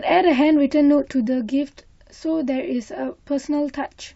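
At 1.27 s a sudden gain jump drops the speech and background noise together by about 4 dB until the end, likely a gain change applied without a ramp.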